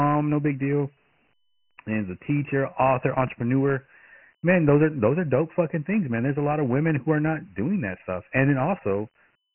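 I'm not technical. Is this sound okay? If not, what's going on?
No. The speech has been stored with Dialogic VOX ADPCM, an old compression scheme used for phone menus and voicemail, and it affects the whole clip from start to finish. It keeps only a rough guess of each sound sample, at a rate that points to 6,000 samples a second, so nothing above 3 kHz survives. The voice sounds muffled and phone-like, with heavy grit and hiss clinging to the speech.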